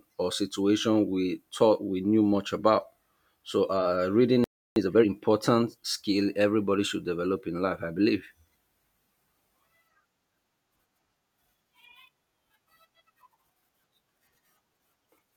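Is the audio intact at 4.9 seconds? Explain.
No. Right after "uh reading", from about 4.76 to 5.08 s, there's a time-compressed catch-up. The player is clawing back a backlog after a stall by snipping out small slices of audio and cross-fading the remaining pieces together, so that third of a second plays at roughly 2.0x speed. Pitch stays where it should be, but the speech sounds rushed.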